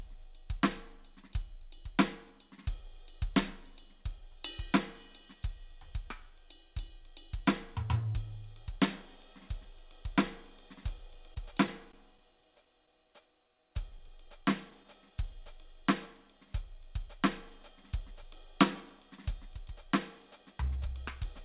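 Between 11.14 and 13.10 s, packets went missing or arrived too late at scattered points, about ten in all. The receiver covered each hole by extending the sound it had just played. These scattered short gaps are small, the longest around 20 ms and roughly a tenth of a second concealed in total, so the music stays clear but picks up brief ticks and little smeared hiccups.

From 13.21 to 14.42 s the jitter buffer was running short, so the receiver stretched the audio to rebuild its reserve, repeating tiny cycles of the waveform again and again. This jitter buffer slow-down adds 50 ms and plays the passage at 96% speed with the pitch unchanged, so the music drags slightly and sustained sounds draw out.

Overlapping that, from 13.98 to 14.86 s, a second cluster of scattered short gaps appears, about seven losses, the longest around 10 ms and about 50 ms concealed in total, covered the same way. 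They add quick ticks and blurs on top of the stretched section.

From 20.62 to 21.39 s the buffer had collected more audio than it needed, so the receiver cut out short slivers of the waveform, removing about 70 ms. This jitter buffer speed-up plays the passage at 107% speed at the same pitch, so the music sounds hurried and loses its steady tempo. Throughout, the call path leaves nothing above 4 kHz, which fits G.711 mu-law at 64 kbps, and that gives the music a narrow, telephone-like tone.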